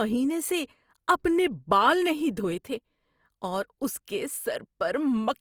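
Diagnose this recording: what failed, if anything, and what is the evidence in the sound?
The fault is at the codec stage, throughout: the speech sounds grainy and rough, its tones turned noisy, likely from Opus compression in CELT mode at a low rate near 24 kbps. Starved bands are refilled with folded or noise energy, so a spectrogram shows few holes but speckled, smeared harmonics, with nothing above 20.4 kHz.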